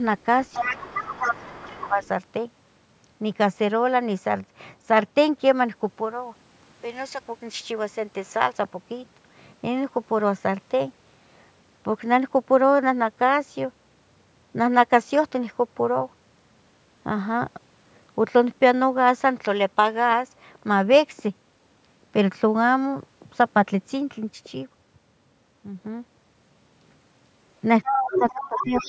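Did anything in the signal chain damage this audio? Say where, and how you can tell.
Yes. The other side's voice leaking through appears from 0.52 to 1.88 s at about 5 dB below the talker, faintly again at 2.04 to 2.08 s, and from 27.84 s to the end. The likely cause is residual loudspeaker echo the call processing's canceller missed, visible as a second, overlapping harmonic pattern on the spectrogram.

Speech suppressed in double talk follows in the same spots, from 1.03 to 2.02 s and from 27.87 to 28.74 s. The waveform envelope sags by up to about 15 and 20 dB, likely from the canceller ducking everything while both sides talked.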